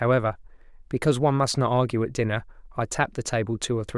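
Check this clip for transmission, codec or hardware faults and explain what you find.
No faults are audible here.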